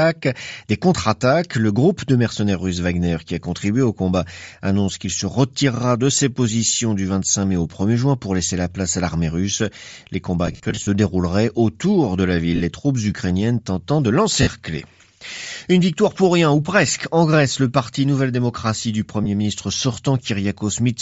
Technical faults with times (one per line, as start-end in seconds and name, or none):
0.00-21.02 Bluetooth LC3 compression
10.47-10.87 lost LE Audio frames
12.56-12.61 lost LE Audio frames
14.42-14.47 lost LE Audio frames
19.24-19.27 lost LE Audio frames